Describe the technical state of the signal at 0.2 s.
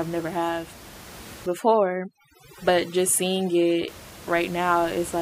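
At 0.2 s the speech signal is intact, with only the room's own background noise sitting about 19 dB below the voice.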